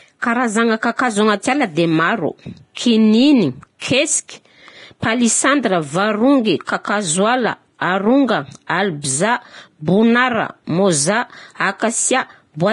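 Speech with heavy, constant coding damage: the treble sounds hissy and grainy, voiced tones have a roughened edge, and nothing at all is present above 10.6 kHz. This is likely Vorbis compression at a low setting, consistent with a rate of around 30 kbps. The encoder has lowered its cut-off and quantised the remaining upper band so coarsely that detail there has turned into noise of similar energy. On a spectrogram this shows as a flat ceiling at 10.6 kHz with speckled, blotchy texture beneath it instead of clean harmonic lines. Pre-echo occurs at 2.75–2.77 s, 3.79–3.81 s and 8.67–8.69 s. Each time, a short hiss runs ahead of a sharp onset for about 22 to 26 ms, and the attack sounds softened. The transform spreads quantisation noise across its whole block, so noise sized for the loud onset also fills the quiet moment before it. On the waveform, a low fuzzy smear appears just before each transient. 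On a spectrogram, a thin broadband haze leads the onset.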